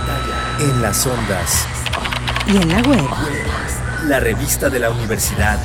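No technical faults can be heard anywhere in this audio. Nothing in the sound points to a problem with how it was captured or delivered.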